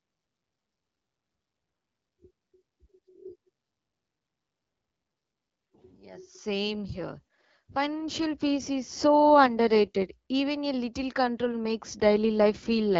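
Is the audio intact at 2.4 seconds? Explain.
Yes, the speech is intact at 2.4 seconds, with no dropout, distortion or other fault at that moment, only the light coding character of AMR wideband (HD Voice) at 12.65 kbit/s.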